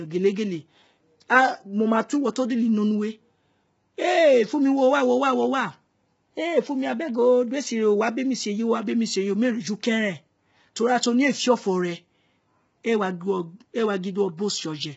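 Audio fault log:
throughout: low-delay AAC compression. The speech sounds rough and grainy, with noise filling the gaps between harmonics; the short frames resolve pitch poorly at a starved bitrate, likely about 16 kbps. A spectrogram shows smeared harmonics and nothing above 7.7 kHz.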